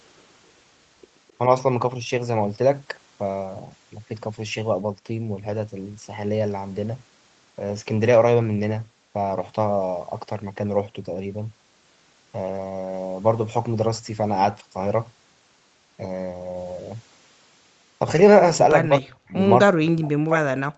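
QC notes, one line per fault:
1.28–1.33 s and 19.28–19.33 s, echo leak: a faint repeat of the sound, trailing by 260 ms and roughly 35 dB below the speech, surfaces briefly each time. This is likely loudspeaker pickup that the far end's echo canceller failed to fully remove and sent back.
18.88–19.36 s and 19.65–20.78 s, speech suppressed in double talk: the speech sinks by as much as about 40 dB, in pieces totalling around 0.4 s in the first span, then again through the clip's end. The likely cause is an echo canceller that, confused by simultaneous talk, attenuated the talker along with the echo.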